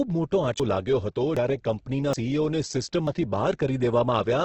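Throughout, the speech sounds grainy and rough, with nothing above about 8 kHz. This is likely heavy Opus compression in its CELT mode, filling starved bands with noise at a bitrate near 12 kbps.

At 0.60 s, just before "લાગ્યો હતો જ્યારે", then at 1.37 s, just after "લાગ્યો હતો", and again at 2.13 s and 3.07 s, the sound jumps ahead. About a tenth of a second goes missing each time, likely a dropped buffer (overrun) where samples were overwritten before collection.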